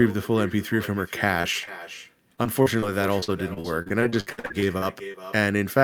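Echo with no canceller runs through the whole speech clip: the far end's loudspeaker feeds its microphone, so every phrase returns after about 0.4 s, a thin copy about 15 dB quieter.

Short concealed packet loss hits at 1.41–1.45 s and 1.65–1.69 s. Roughly 20 ms of audio arrived too late each time, and the receiver extended the preceding sound, leaving brief smears.

Repeated packet loss (robotic sound) follows at 2.35–2.84 s and then 3.20–5.16 s. Holes of up to 33 ms and 60 ms recur, patched by continuing prior sound over 19% and 25% of each stretch, giving choppy speech with pieces missing.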